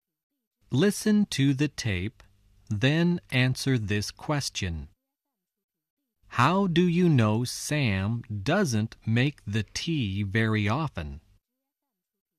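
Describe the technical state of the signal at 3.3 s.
At 3.3 s the speech signal is intact, with no dropout, distortion, glitch or other technical fault.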